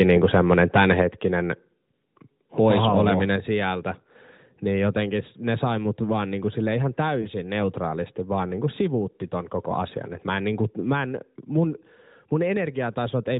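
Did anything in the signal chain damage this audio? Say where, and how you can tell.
Yes. From the start to 1.02 s the loudest syllables carry a harsh, crackling edge, with flattened peaks on roughly one percent of samples. This is likely microphone overload at the converter stage: input gain drove the signal about 6 dB past full scale, cutting off the waveform tops.

At 1.02 s the voice and background both drop abruptly by about 4 dB, in one step rather than a fade. This is likely the call processing stage catching the clipping and stepping the microphone volume down by lowering the device's input gain at once.

Between 7.22 and 7.28 s there is a brief dip or warble in the speech, the sign of a single lost AMR speech frame of 20 ms. In the network and codec stage, the AMR-NB decoder at 12.2 kbps, band-limited to 4 kHz, bridged the gap by reusing the previous frame's settings with falling gain.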